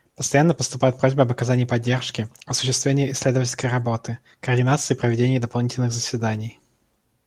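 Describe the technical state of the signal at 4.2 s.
At 4.2 s the speech signal is intact, with no audible fault at that moment.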